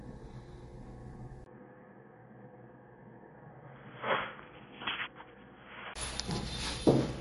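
A recording of everyday sounds carries MP3 compression from start to finish: nothing survives above 11.2 kHz, with plainly audible watery, swirling artefacts that fit a low bitrate around 48 kbps. From 1.44 to 5.96 s the audio turns dull and boxy, most likely because the input switched to a poorer device. Above 3.3 kHz it falls silent, about 10 dB quieter, with new background noise far below the sound and a 20 ms gap at the switch. Unlike the steady codec ceiling, this band-limit comes and goes.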